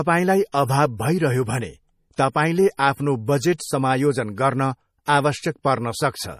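Throughout, the speech sounds watery and swirly, with treble ending sharply at 15.1 kHz, likely MP3 compression at a low bitrate near 40 kbps; the warbling sets it apart from plain filtering.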